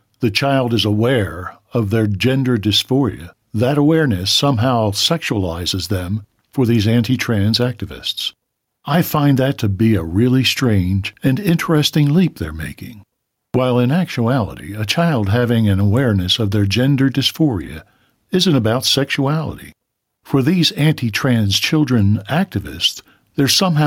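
Gain pumping runs through the whole speech clip, from start to finish. The level ducks under every loud syllable, swinging by around 5 dB. The likely cause is input gain set far too high for the microphone, with a fast limiter or compressor clamping down on each peak and releasing in the gaps. Loud and quiet passages sit unnaturally close together, and the speech sounds squashed and breathing.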